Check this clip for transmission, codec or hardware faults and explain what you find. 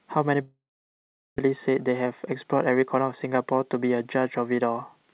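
Two faults are audible in this speech clip, one straight after the other, heard through a narrowband call path whose missing content above 4 kHz fits G.711 A-law at 64 kbps.

From 0.42 to 1.40 s there is a long network dropout. Packets likely stopped arriving, so the receiver stretched the last sound into a fading buzz or hiss before settling into near-silence for most of the gap. Speech resumes with roughly 0.8 s of audio gone.

From 1.47 to 2.96 s comes a jitter buffer speed-up. Once the delayed audio arrived, the buffer ran too full, so the receiver repeatedly cut out pitch-period-sized pieces, removing about a tenth of a second. Speech plays about 7% faster at unchanged pitch and sounds hurried.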